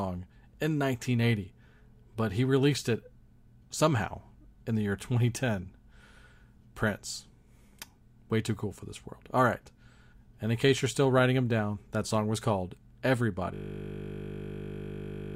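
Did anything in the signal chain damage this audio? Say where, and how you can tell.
Yes. At the driver or buffer stage, a system hang loop starts at 13.54 s and runs to the end. A 20 ms slice of speech repeats exactly, producing a steady 50 Hz buzz. This fits a frozen host while the interface kept replaying its ring buffer.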